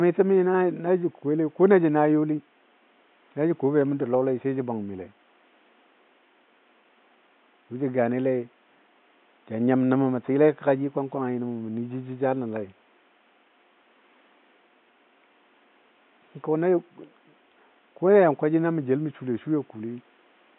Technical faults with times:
none

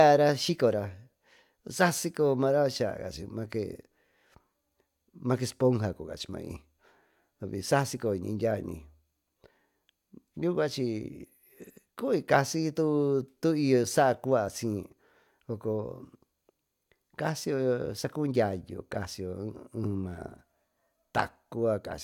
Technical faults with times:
none

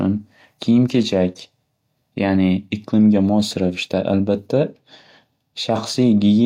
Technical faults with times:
none

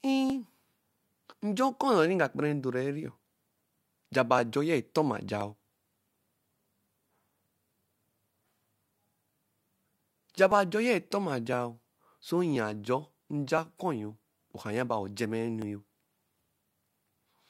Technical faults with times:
0.30-16.65 periodic USB or driver dropouts

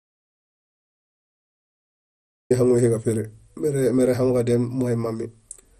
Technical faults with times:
0.00-5.79 MP2 compression
0.00-2.50 audio dropout to silence

